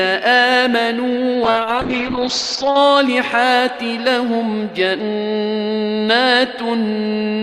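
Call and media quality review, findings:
Call bitrate drop, 1.45 to 2.83 s. Bandwidth estimate collapsed and the encoder was throttled hard; the coarseness fits a fall from about 48 kbps to 8 kbps, held at the floor for 1.32 s. Opus encoder side: top end cut from 20 kHz to 8 kHz, audio muffled and rough/watery until the rate recovers.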